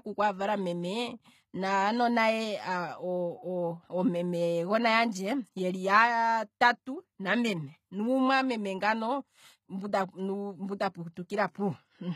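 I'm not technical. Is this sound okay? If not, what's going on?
No, not quite. All the way through, the s sounds in this speech come out gritty, metallic or lispy, and the damage is easy to hear. That points to HE-AAC compression as the likely cause. This kind of encoder stores only the lower part of the sound properly and rebuilds the upper part by copying lower tones upward. Ordinary muffling would make the voice dull. Here the treble stays bright but sounds artificial, and it stops altogether above about 15 kHz.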